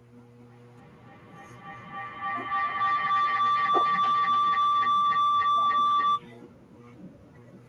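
From 0.49 s to 6.26 s a feedback howl takes over. Two devices on the same call share a room, so the sound keeps looping back louder. It narrows to a tone around 1 kHz, with repeats roughly every 0.3 s, peaking about 23 dB over the speech.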